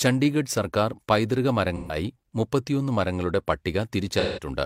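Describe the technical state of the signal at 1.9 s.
At 1.9 s the speech turns into a smeared, noisy or phasey patch running from 1.77 to 1.96 s, between "ചണ്ഡീഗഡ് സർക്കാർ പൈതൃക" and "മുപ്പത്തിയൊന്ന് മരങ്ങളുടെ". This is AAC frame loss with concealment: about 128 ms of coded audio went missing, which fits three lost frames, and the decoder rebuilt the gap from the last good spectrum instead of the real signal.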